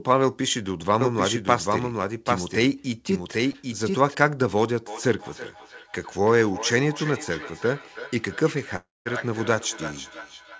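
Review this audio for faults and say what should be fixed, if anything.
The audio was likely captured a second time by a slower path, so a full-band copy of the speech is mixed in roughly 0.7 s behind the original and about 5 dB quieter, from 1.01 s to 4.15 s. That copy has no decay or room colour, so it sounds like a second, slightly softer take running out of step. It cuts in and out abruptly at both ends. Routing each source through a single capture path, with any monitoring copy kept out of the mix, prevents this.

Short concealed packet loss occurred at 3.52 to 3.56 s, where 20 ms of the call did not reach the decoder in time. The receiver covered the gap by extending the sound just before it for 20 ms and then blending back into the real audio. It comes through as a brief smear or wobble inside the doubled passage, and any short consonant there can be lost. A larger jitter buffer or a more stable network link would stop packets arriving too late.

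A feedback echo between two devices runs from 4.87 s to the end of the clip. Two devices in the same room are on the call, and one plays the other's audio back into that device's microphone. Neither echo canceller removes sound played by the other device. Each phrase therefore returns at intervals of about a third of a second, at least about 14 dB below the speech and thinner and more ringing with each pass. Muting the speaker and microphone on all but one device in the room prevents the loop.

A long network dropout, likely a stall in delivery, interrupts the audio from 8.76 s to 9.07 s, losing about 0.3 s. The receiver first continues the last sound as a buzz or hiss that fades. About 0.2 s of silence follows before speech resumes further on, with the missing portion gone rather than delayed. All of this sits within the G.722 call band, with nothing above 8 kHz. A more reliable connection, or forward error correction and redundancy on the call, would reduce such gaps.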